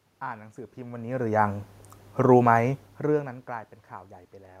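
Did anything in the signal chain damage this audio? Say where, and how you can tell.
No, nothing in the signal chain damaged this speech. The steady background noise belongs to the room itself, and the level changes around half a second in and again near two and a half seconds come from the talker shifting position at the microphone.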